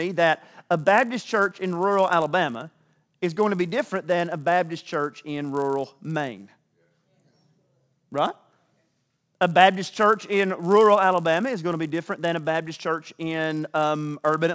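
The clip is speech, with one fault running through all of it: a resampler restarted on every block. Each 10 ms block was converted separately, so every edge carries a small error. This gives a 100 Hz buzz that sounds only with signal, which fits a conversion from 44.1 kHz down to 16 kHz.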